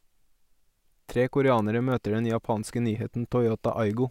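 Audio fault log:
0.15–4.02 s, word clock ticks: a steady run of around forty ticks, about ten a second, under the speech. The receiving end isn't locked to the sender's clock; with a mismatch of a couple of hundred ppm, the clocks slip regularly, each time dropping or repeating one sample.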